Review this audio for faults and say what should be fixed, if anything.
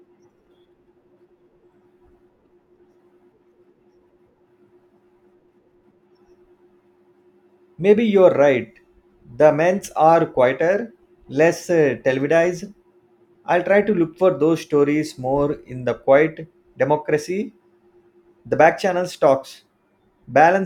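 No faults can be heard in this speech recording, so nothing needs fixing. There is no fault here to trace or prevent.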